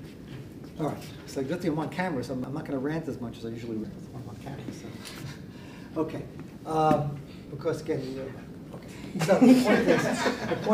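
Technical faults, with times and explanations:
0.76, 2.44, 3.84, 5.0, 7.48 and 9.04 s: dropped buffer (overrun). Each one is a point where the sound jumps ahead with no gap, as roughly 40 to 100 ms vanishes and the two edges butt together. The likely cause is the program not reading the hardware buffer before it was overwritten.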